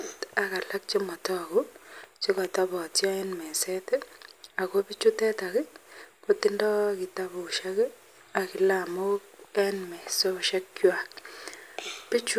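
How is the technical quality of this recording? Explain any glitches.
Nothing in the recording sounds technically wrong.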